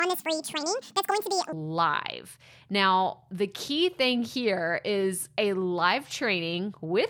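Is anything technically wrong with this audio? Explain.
Yes. From 0.0 to 1.5 s, a section at the wrong speed: playback likely runs on a mismatched clock at 1.79 times speed, so the speech turns hurried and about ten semitones higher.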